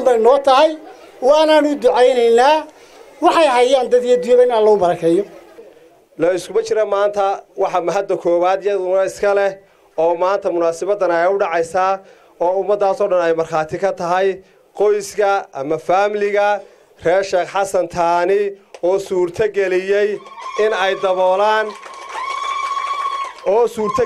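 No technical faults can be heard anywhere in the recording, and the signal stays steady and intact throughout.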